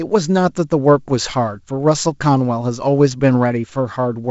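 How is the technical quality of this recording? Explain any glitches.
No glitches or faults audible.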